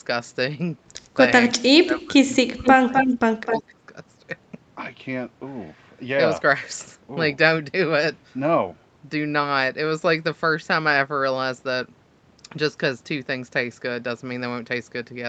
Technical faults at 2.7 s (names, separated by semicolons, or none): speech suppressed in double talk; echo leak